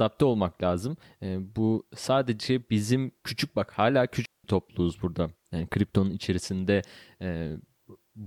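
A digital wireless dropout cuts this speech clip from 4.26 to 4.44 s, right after "bizim küçük bak hala" and before "topluluğuz burada". For about 0.19 s the sound drops into a clean hole of near silence. The receiver has lost too much of the incoming data to rebuild the signal, so it mutes with a very fast fade rather than pass garbage. No burst of noise comes before or after the gap.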